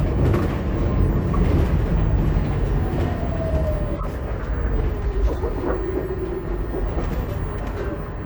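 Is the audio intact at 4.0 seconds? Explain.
No. From 3.96 to 4.06 s, around the 4.0 s mark, the sound is broken by a brief glitch of misplaced energy peaking at roughly -15 dBFS. This is a corrupt frame decoded: flipped bits in the compressed stream made the decoder read wrong gains and codes and play them anyway, scattering energy across the wrong frequencies for roughly two frames' length.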